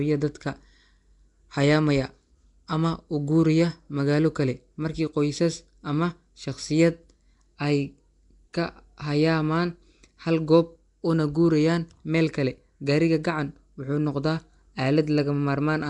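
Nellymoser compression runs through the whole clip, from start to finish, and the damage is plainly audible. The likely cause is the old Flash microphone codec, which codes short blocks at a fixed, small number of bits per sample and replaces weak bands with noise. The result here is a rough, hissy halo around the speech and a smeared, underwater quality, with nothing above 10.6 kHz, which fits a rate near 44 kbps.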